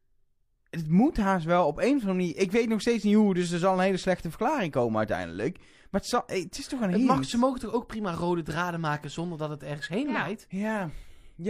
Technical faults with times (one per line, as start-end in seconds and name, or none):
none